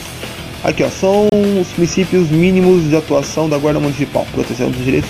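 At 1.29 to 1.33 s, a corrupt frame was decoded. Damaged data in a couple of compressed frames was played anyway, giving a brief chirp, squeak, blip or burst of noise.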